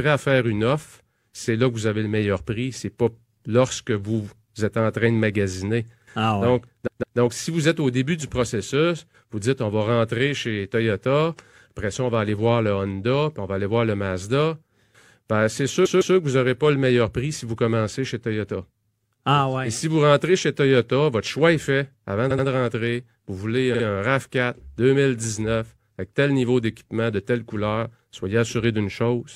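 Repeated frames cause four stutters. At 6.86 s, before "donc si vous êtes", and at 15.85 s, a 157 ms block plays three times. At 22.30 s, before "de rentrer", a 78 ms block triples. At 23.74 s, a 52 ms block does the same. Each replay jumps audibly back.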